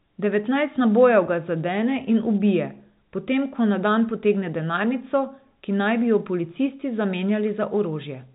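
Speech shows no faults, only the expected G.711 telephone band with nothing above 4 kHz and at most faint level-tracking quantisation noise.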